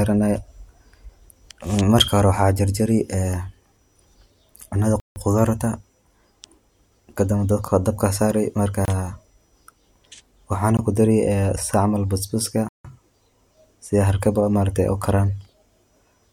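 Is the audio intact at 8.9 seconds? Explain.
No. A block of digital silence runs from 8.85 to 8.88 s, a 28 ms stretch where the sound drops straight to silence, probably because the output buffer was not filled in time. The abrupt cut and return leave a brief hole in the speech.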